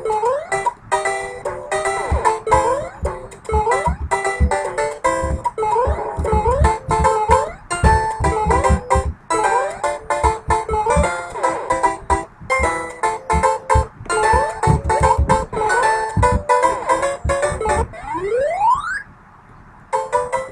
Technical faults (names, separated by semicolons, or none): none